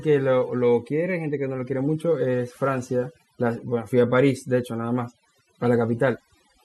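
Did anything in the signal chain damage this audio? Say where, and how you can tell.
Yes. The damage comes from the call processing stage: overdone noise removal runs through the whole clip. Between phrases the background collapses to near silence dotted with twinkling specks. The suppressor was set too hard, so any band near its noise estimate is pushed far down or cut, taking quiet speech detail with it. On a spectrogram the gaps show as black with isolated bright dots, and the speech appears patchy.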